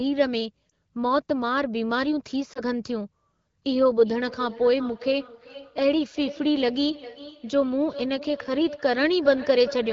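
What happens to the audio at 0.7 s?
At about 0.69 s a single AMR speech frame is lost, about 20 ms of audio. It failed its checksum, so the decoder repeated the previous pitch and vocal tract settings at reduced gain. The result is a brief dip or warble in the speech.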